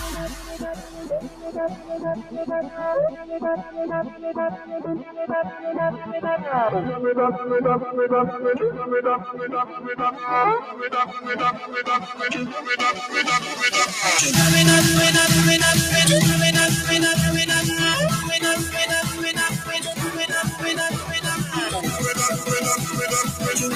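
A noise suppressor built for speech stays engaged across the whole clip. It treats steady tones, ambience and decaying tails as noise and pulls them down, so the level swings by around 10 dB as the processor decides what to keep. Sudden attacks pass through while sustained and fading material sinks beneath them.

The first case of sound cut by the noise suppressor runs from 0.13 to 6.11 s. Roughly three seconds of that stretch are pushed down, by about 10 dB at the deepest. From 9.31 to 12.61 s about a second and a half is held back, reaching about 9 dB. Shorter dips follow at 19.1 to 19.94 s (about 7 dB) and 20.51 to 21.55 s (about 8 dB). A final cut of about 7 dB starts at 22.39 s and lasts to the end. In each case the held and fading parts drop away or end early, while the sharper onsets mostly come through.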